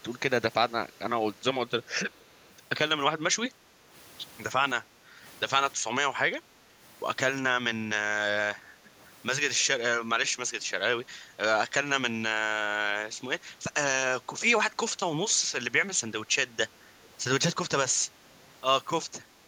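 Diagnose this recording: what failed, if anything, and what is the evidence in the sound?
The failure is in call processing, at the echo-cancellation stage. A faint, delayed copy of the speech appears, trailing the original by 325 ms. The longest stretch runs from 2.11 to 2.53 s. Brief scraps follow at 8.85–8.89, 9.60–9.65, 10.60–10.64 and 17.04–17.08 s. It sits far below the main speech, a little stronger at 9.6 s. This is likely an echo leak. The far side's loudspeaker output reached its microphone, and its canceller did not fully subtract it.

Background gated by the echo canceller shows up twice. It is the same call-processing stage. The room sound dips by about 6 dB from 3.57 to 3.86 s. It dips again, by about 9 dB, from 4.81 to 5.23 s. Each dip lasts well under half a second and then recovers. The canceller is pulling the microphone down hard while the loudspeaker plays. That suppresses the ambience along with any echo, and the ambience returns when it releases.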